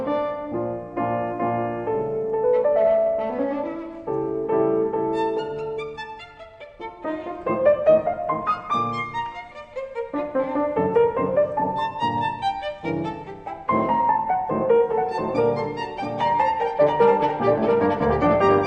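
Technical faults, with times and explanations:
14.90–18.66 s, doubled audio track: a full-band copy about 5 dB quieter trails by roughly 0.7 s to the end, likely from a second, slower capture path.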